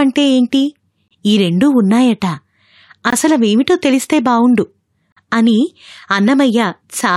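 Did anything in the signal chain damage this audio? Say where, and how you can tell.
Yes. At playback, there is a gap between stream segments: adjacent segment timestamps don't meet, so the player fills the gap with silence. Hard-edged holes interrupt the speech at 1.08 s (27 ms), 3.10 s (21 ms) and 5.12 s (43 ms). They recur every 2 s at segment joins, and no audio is lost.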